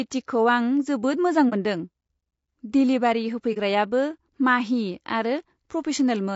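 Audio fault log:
throughout, low-delay AAC compression: plainly rough, grainy speech with noise between pitch harmonics, likely from AAC-ELD's short frames starving the harmonics at a rate that fits about 32 kbps.
1.49–1.53 s and 3.53–3.57 s, AAC frame loss with muting: a 30 ms gap, the first just after "जोबोद मोजां", fading out and back in smoothly.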